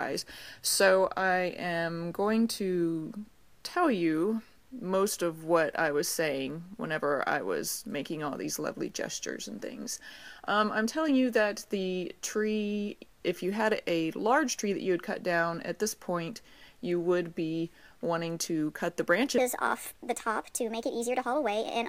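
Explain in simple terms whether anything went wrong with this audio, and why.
A section at the wrong speed runs from 19.38 s to the end at 21.89 s. The sound jumps to 1.36 times faster and roughly five semitones higher, since speed and pitch move together. That part was likely played against the wrong clock.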